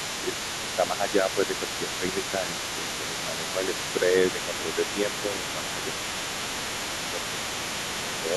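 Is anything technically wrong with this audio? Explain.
Yes. There are two related faults in this speech recording.

The other side's voice is leaking through from 0.0 to 8.36 s, the whole clip. A second voice sits behind the talker, about 10 dB below. The likely cause is the talker's loudspeaker playing the far end into the microphone. The echo canceller did not remove all of it. What remains comes through as a fainter, competing voice.

Speech is suppressed in double talk at 0.63 to 2.58 s, 2.75 to 3.73 s, 4.32 to 5.82 s and 7.04 to 7.41 s. In each span the talker's level sinks by about 5 dB. The dips add up to around a second in each of the first three spans and much less in the last. These are likely moments when both sides spoke at once. The echo canceller could not separate the talker from the echo, so it turned both down together.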